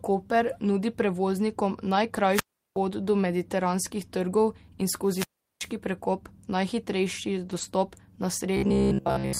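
At 0.43–0.49 s, just before "nudi prevoznikom", two lost packets are rebuilt from error correction: about 40 ms of speech is decoded from the low-bitrate copy carried in the following packets. There is no gap, but the passage turns briefly rough and noisy. The same happens at 3.83 s for about 20 ms, and at 7.45–7.67 s over a longer stretch of about 120 ms.

Between 2.30 and 2.77 s, after "nudi prevoznikom" and before "pot do", a wireless microphone squelch dropout occurs. The radio signal fades, hiss rises, and the receiver mutes for about 370 ms. A second dropout at 5.04–5.74 s, before "prekop najhitrejši", mutes for about 375 ms.

From 8.57 s to the end, the speech becomes a rigid, metallic buzz at 66.8 Hz that still loosely follows the speech. This is likely robotic sound from repeated short buffers. Most of the audio is replaced by repeats of a roughly 15 ms segment, which fixes that pitch.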